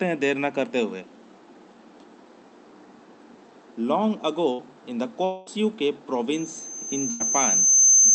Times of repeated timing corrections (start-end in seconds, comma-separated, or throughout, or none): none